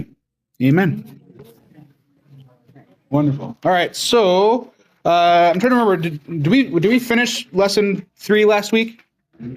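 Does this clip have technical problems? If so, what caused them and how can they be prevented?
Yes: gain pumping runs throughout. The gain swings by about 10 dB, ducking under every loud sound, squashing loud and soft parts together. The likely cause is input gain set far too high, with a fast limiter repeatedly clamping it. Lowering the input gain and relaxing the limiter would prevent this.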